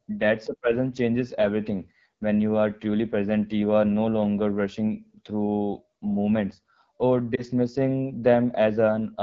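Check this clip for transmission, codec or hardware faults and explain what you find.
Two faults are audible: plainly audible low-rate codec damage across the whole clip, and one short dropout near the end.

AMR wideband (HD Voice) codec, throughout: The speech was squeezed through AMR-WB at one of its lowest rates, which fits the 8.85 kbit/s mode. The encoder models speech below 6.4 kHz as pulses driving a vocal tract filter and fakes the 6.4 to 7 kHz band with shaped noise. At this rate too few bits go to the pulses, so the speech sounds plainly rough and raspy.

Lost AMR speech frames, 7.36 to 7.42 s, right after "rushing through moments or": A radio error corrupted a frame, and it failed its checksum. The decoder filled the gap by reusing the last good pitch and vocal tract settings at reduced gain, which fits a single lost 20 ms frame. The result is a brief dip or warble in the speech, followed by a moment of weak or rough sound as the decoder recovers.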